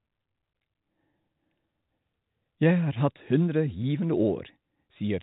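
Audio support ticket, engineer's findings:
Nothing stood out on listening; the speech comes through at ordinary telephone bandwidth with no audible events to log.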